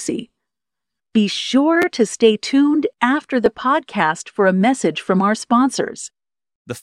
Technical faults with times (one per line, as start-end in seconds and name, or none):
1.82-1.84 repeated buffer
3.46 repeated buffer